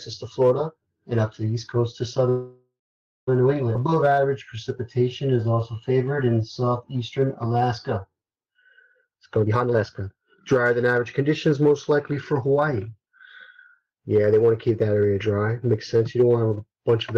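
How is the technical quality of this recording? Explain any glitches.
The recording has clear delivery problems: a freeze, a jump forward, then a stretch played too slowly followed by one played too fast.

From 2.29 to 3.29 s there is a call audio freeze. The likely cause is that packets were held up in transit, leaving the jitter buffer empty with nothing to play. The receiver extended the last sound as a fading buzz or hiss, which then gives way to about 0.52 s of silence. When the packets arrived, playback resumed where it had stopped. Nothing is lost, but about a second of gap has been inserted.

Between 3.73 and 3.76 s the audio skips ahead. A stretch of audio was discarded while later audio was already waiting. This happened either in transit or because the jitter buffer overflowed. Roughly half a second of material is missing. The audio on either side of the cut is joined almost directly, so the jump is abrupt.

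From 3.79 to 4.57 s and again from 4.99 to 8.91 s there is jitter buffer slow-down. With the buffer running low or its target delay just raised, the receiver rebuilt its reserve by repeating single pitch periods or fragments of pauses many times in a row. Playback runs at 91% speed while the pitch stays the same, so sounds are drawn out. The two stretches add 79 ms and 366 ms respectively.

From 8.94 to 13.14 s there is jitter buffer speed-up. The buffer now held more audio than its target, so the receiver cut short pieces of one or a few pitch periods again and again to reduce the delay. Roughly 0.7 s is removed. Playback runs at 120% speed with unchanged pitch, which sounds noticeably hurried.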